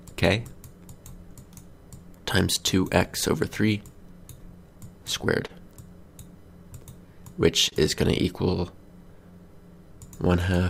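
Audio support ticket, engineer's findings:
Clock drift between sender and receiver, whole clip: sender's clock runs roughly 2% slow, so the receiver's jitter buffer keeps draining and it has to pad the gaps.

Repeated timing corrections, 0.82 to 4.84 s and 6.63 to 10.66 s: short pieces repeated to cover the slow sender, playing at 98% speed. That adds about a tenth of a second in the first stretch and a bit less in the second, heard, if at all, as slight hiccups or an unsteady tempo.

Short stall from a late packet, 5.46 to 5.51 s and 7.69 to 7.74 s: buffer ran dry, so the last bit of sound gets held for 32 ms and then 26 ms. Nothing lost, just a brief smeared hold.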